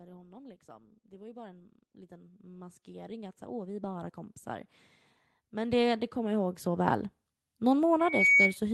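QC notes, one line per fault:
0.22 to 4.25 s and 5.5 to 6.96 s, automatic gain rising: the level climbs by about 14 dB, then about 6 dB, as the gain control lifts a quiet input. Speech and background noise swell together, so this is a gain change, not someone speaking louder.
7.99 to 8.57 s, loudspeaker feedback squeal: a single 2.2 kHz tone grows on its own over roughly a third of a second and peaks about 10 dB above the speech as the mic-to-speaker loop exceeds unity gain. That self-reinforcing build marks it as feedback rather than a steady interference whistle.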